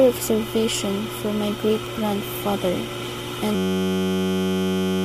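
From 3.55 s to the end at 5.04 s, a system hang loop replays one 10.67 ms slice, which fits a 512-sample buffer, as a steady 93.8 Hz buzz. The waveform shows an identical repeating cycle; the spectrogram shows flat harmonics spaced 93.8 Hz apart.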